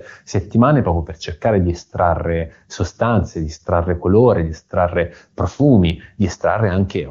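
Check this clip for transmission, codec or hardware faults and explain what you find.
Nothing faulty here; the speech is carried by an AMR wideband (HD Voice) codec at its top rate of 23.85 kbit/s, which leaves at most faint coding traces.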